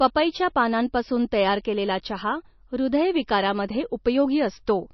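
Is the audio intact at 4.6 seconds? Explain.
No. At 4.6 seconds, as throughout the clip, the speech has been squeezed through heavy MP3 compression, likely at a very low bitrate of roughly 27 kbps. Starved of bits, the encoder cuts the treble outright, leaving nothing above 5.9 kHz, and drops weak frequency lines that then flicker in and out from frame to frame. The result is dull, band-limited speech with a watery, swirling texture, metallic chirps on s sounds and smeared consonant onsets.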